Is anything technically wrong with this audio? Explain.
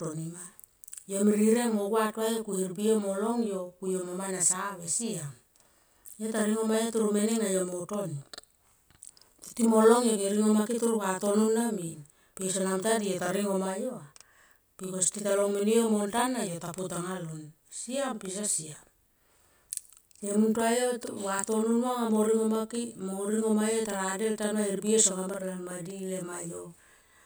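Yes. A channel delay (doubling) runs through the whole speech clip. One channel arrives about 42.7 ms after the other, which fits a 2048-sample buffer at 48 kHz. When the channels are summed to mono, the late copy is too far behind to fuse with the original, so every syllable is followed by an equal-level slap echo. On the waveform, each onset appears twice, 42.7 ms apart. On a spectrogram, the transients are smeared into doubled vertical edges.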